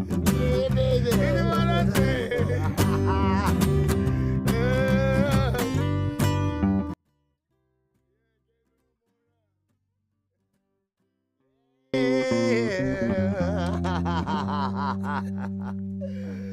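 A 24-bit alignment error occurs from 6.94 to 11.94 s: samples sitting in the low bytes of 32-bit words are read as full 32-bit values, dropping the sound by about 48 dB to near-inaudible levels.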